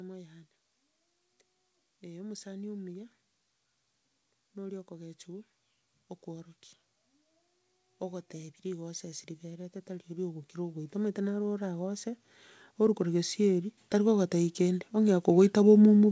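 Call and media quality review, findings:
Automatic gain rising, 8.0–12.07 s: speech and background noise swell together by about 9 dB over roughly four seconds. AGC judged input too quiet, ramped gain gradually. Automatic gain rising, 12.77–15.83 s: second ramp, about 6 dB over three seconds, same component and mechanism. The call path's band limit, with nothing above 8 kHz, fits a G.722 codec at 64 kbps.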